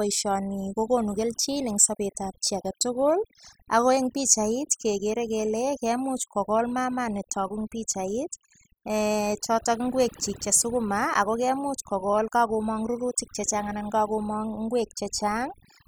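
You've got a speech recording here with overdone noise removal running the whole way through. Someone pushed the noise reduction way too hard, so any frequency band sitting near its noise estimate gets clamped down or switched off, and the softer bits of the voice get swallowed along with the background noise. The gaps drop to an eerie near-silence sprinkled with little twinkly specks.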